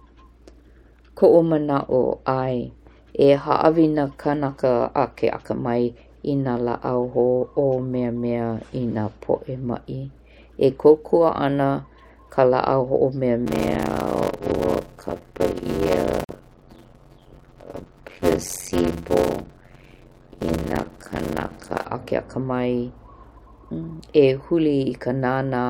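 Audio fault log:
13.45–21.85 s, block size mismatch (padded): A steady buzz at about 91.9 Hz sits over the speech, and the passage drags at 0.533 times normal speed while the pitch stays roughly natural. One stage is likely handing over shorter blocks than the next stage reads, and the shortfall in each block is filled with zeros. That inserts a brief dropout once per block, which produces the buzz at the block rate and stretches the timing. The ratio fits 256-sample blocks being read as blocks of about 480 samples.
16.24–16.29 s, gap at a join of encoded pieces: A gap of about 43 ms cuts into continuous speech inside the slowed passage. The speech then resumes from where it stopped, with no content lost. The edges are smeared by the codec, so the silent part is shorter than the gap. This happens when separately encoded pieces are joined without trimming. Each piece keeps the encoder's leading delay and the padding in its final frame, so silence is left at the seam.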